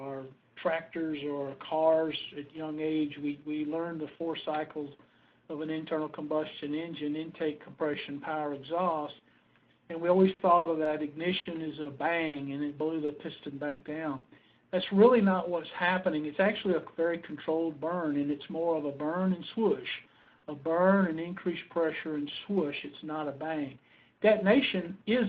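The audio comes through a call path whose top end stops near 12 kHz, which fits an Opus link at around 32 kbps. Two stretches of repeated packet loss give it a robotic sound. From 10.33 to 12.36 s, six gaps are patched by carrying the last sound forward, with 320 ms synthesised and 240 ms of real audio missing. The longest single gap is 80 ms and about 16% of the span is concealed. From 13.05 to 14.26 s, four more gaps follow. Here 220 ms is filled, 180 ms is lost and one gap reaches 120 ms, concealing about 18% of that stretch. The result is choppy audio with pieces dropped. At 20.22 to 20.29 s there is a short stall from a late packet: the jitter buffer ran dry, so the receiver held the last sound for 40 ms until the packet arrived, then resumed from the same point. Nothing is lost, but the held sound smears slightly and the playout delay grows by 40 ms. Immediately after, from 20.38 to 20.47 s, a burst of packet loss leaves a 60 ms hole. 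Concealment extends and fades the preceding sound into a brief buzz or hiss, and then playback jumps ahead, skipping 60 ms of audio. Between 22.22 and 23.21 s the jitter buffer speeds up. To shed the excess delay it trims a few tens of milliseconds in small pitch-period slices, so the audio plays at 103% speed with unchanged pitch.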